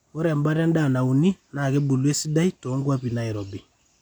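No technical faults can be heard in this recording of speech.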